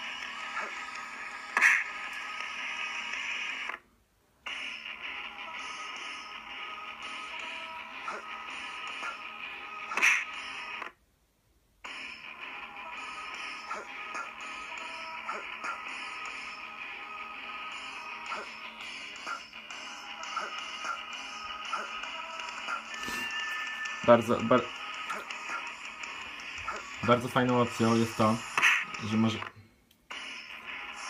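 No technical faults can be heard anywhere in the recording, and the signal stays intact and continuous throughout.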